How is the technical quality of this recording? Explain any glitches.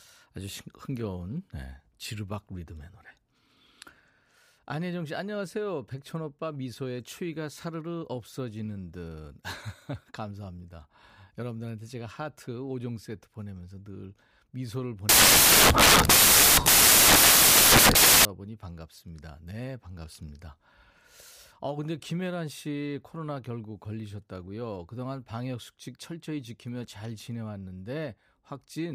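Samples built from the wrong bytes, 15.09 to 18.25 s: misassembled bytes turn the fast-changing low bits into each value's bulk, giving loud, harsh broadband noise, close to white on the louder speech.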